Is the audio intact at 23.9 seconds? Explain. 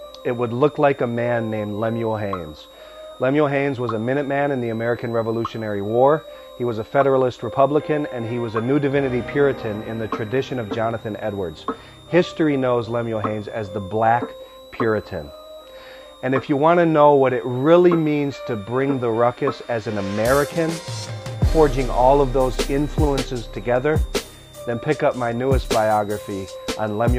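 No. At 23.9 seconds, as throughout the clip, a switching supply whistle sits under the sound: a high, thin tone near 4 kHz, drifting between about 3.5 and 4.0 kHz, roughly 30 dB below the signal. It comes from a switching power supply running in an audible burst mode or beating against another supply. On a spectrogram it shows as a narrow horizontal line that wanders slightly in that band.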